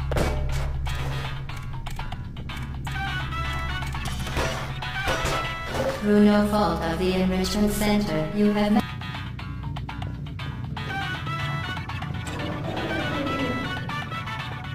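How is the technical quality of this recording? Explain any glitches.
There is one glitch, a brief burst of damaged data in the compressed stream from 2.84 to 2.89 s. For roughly 58 ms, part of the encoded file is corrupt, whether through lost, zeroed or overwritten bytes. The decoder cannot read those frames correctly, loses synchronisation, and scans forward for the next valid frame header before normal decoding resumes. The result is a short, harsh blip or squawk that breaks the flow of the audio at that point.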